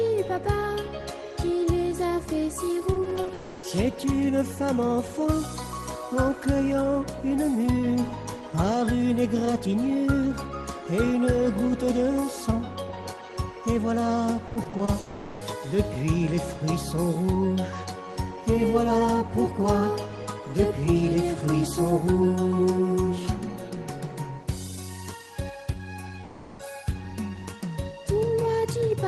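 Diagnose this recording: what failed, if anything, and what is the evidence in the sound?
At 2.93 to 3.31 s and again at 14.47 to 14.89 s the sound turns choppy, with a robotic stutter. This is repeated packet loss (robotic sound) at the network stage. Six short holes fall in each stretch, the longest about 20 ms in the first and 40 ms in the second. The receiver patched each hole by extending the previous audio, about 120 ms and 160 ms in total, so roughly a third of each span is synthetic fill.

Straight after the first burst, at 3.33 to 3.65 s, the sound smears into a sustained buzzy continuation for about 300 ms, then resumes with that stretch gone. The same happens at 14.99 to 15.43 s for about 420 ms and at 26.23 to 26.61 s for about 360 ms, and none of these gaps drops to silence. The likely cause is a long network dropout, with the receiver's concealment filling each whole hole on an Opus call path whose 12 kHz top end suggests a low bitrate near 20 kbps.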